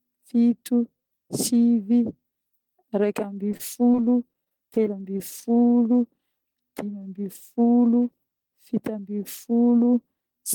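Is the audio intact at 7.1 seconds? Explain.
Yes, at 7.1 seconds the speech is intact, with no dropout, click, distortion or other fault.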